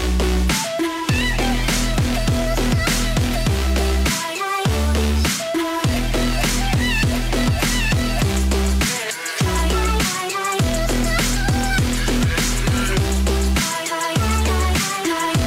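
At 12.07 s there is a DC step. The zero line of the waveform suddenly jumps to a new offset, about -30 dBFS. This is the kind of shift a converter recalibration or a switched-in input with an offset produces. The jump is heard as a single low thump. The offset does not hold. It drains away, as a 5 Hz high-pass would remove it. The sound itself carries on unchanged through the event.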